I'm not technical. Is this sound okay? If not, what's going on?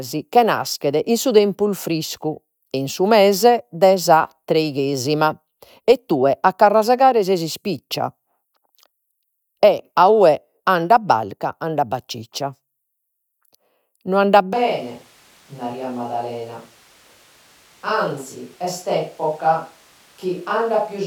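No, not quite. At about 14.5 s, right through to the end, the voice suddenly turns roomy and hollow, a bit quieter and thinner, with more background noise around it. That's a switch to a distant microphone, likely because the close mic dropped out.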